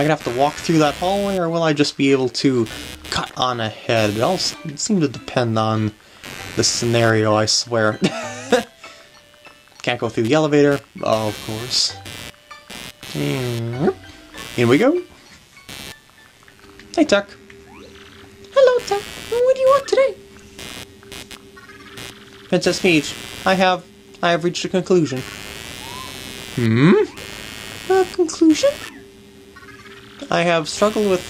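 Computer activity noise runs from start to finish. Shifting load on the processor, graphics card or mouse disturbs the ground shared with the audio circuit, and that disturbance rides into the recording. The result is a buzzing, chirping texture pulsing at around a hundred times a second, sitting roughly 20 dB below the wanted sound. It swells and fades with what the computer is doing rather than following the audio itself.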